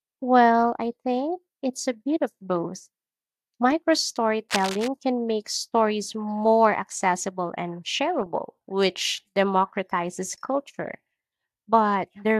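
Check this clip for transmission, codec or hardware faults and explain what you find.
One hardware fault is audible. From 4.49 to 4.88 s, just before "can make stories more", there is cable scratch noise. Dense, uneven scratching sits about 10 dB below the speech. The likely cause is a worn connector shifting its contact resistance.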